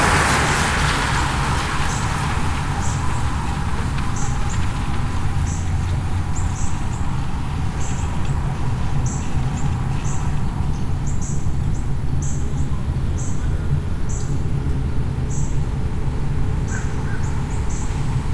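No technical faults can be heard anywhere in this recording of sounds.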